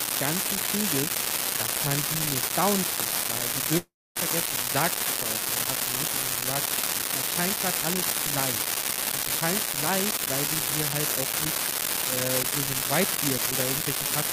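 From start to end an unreliable data bit adds same-sized spikes to random samples, a steady crackle that persists through pauses, unlike clicks tied to loud passages. At 3.77 to 4.17 s the sound smears into a fading buzz, then about 0.25 s of near silence, likely a long network dropout; the speech resumes with about 0.38 s lost, not delayed.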